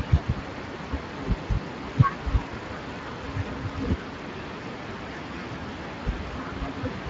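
Speech passed through the Speex codec throughout, at a bitrate fitting roughly 20 kbps, leaving plainly audible damage: a noisy, hoarse texture.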